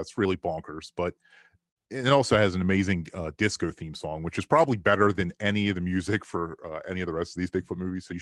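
The sender's audio clock runs about 4 percent faster than the receiver's, so this speech arrives slightly quicker than it is played out and the jitter buffer keeps filling. That clock drift between sender and receiver persists through the whole recording, and no steady playback rate can absorb it. The receiver answers with repeated timing corrections from 0.25 s to 8.14 s, trimming short slivers of audio at uneven intervals. All the edits go the same way, pulling the pace to about 105 percent of normal. The call path itself, a WebRTC link whose top end stops near 12 kHz in a way that fits Opus at a moderate bitrate, adds only its ordinary coding texture beneath these skips.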